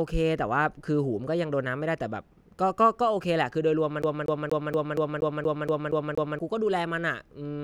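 From about 4.02 s to 6.39 s the speech gets caught in a CD stuck on one turn. A scratch keeps knocking the laser back a track, so the same 236 ms snippet comes round again ten times, each pass cut off by a brief mute at the jump. What you hear is that quick, dead-even stutter of a skipping disc, the talking frozen in place for over two seconds before it finally breaks free and carries on.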